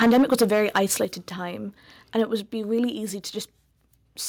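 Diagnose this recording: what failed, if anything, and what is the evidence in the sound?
Microphone overload, at the converter stage, runs from 0.01 to 1.01 s and returns briefly from 2.19 to 2.22 s. In the first stretch the speech has a hard, crackling edge on every loud syllable, with the peaks flattened against the converter's limit. The signal was about 9 dB over, with roughly a tenth of samples clipped. The second burst is milder, about 1 dB over. The likely cause is an input gain set too hot, so the converter sliced off waveform tops.

Microphone volume stepped down, in call processing, happens at 0.04, 1.05, 2.4 and 3.42 s. Each time, speech and room level drop abruptly together: by about 2 dB, then about 7 dB right after the long overload, about 3 dB just before "be really easy", and about 2 dB just after "be really easy". This is likely the call software's automatic gain control reacting to clipping by cutting the device input level in single steps.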